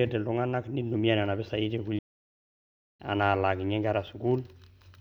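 At 1.99 s the speech cuts off abruptly and the output goes completely silent until 3.00 s, a playback stall lasting about 1.01 s before the sound resumes. The likely cause is the player running short of data or its audio thread being blocked, so nothing reached the output until it recovered. On a waveform this shows as a flat line with hard edges at both ends. On a spectrogram it appears as a clean vertical gap with no energy at any frequency.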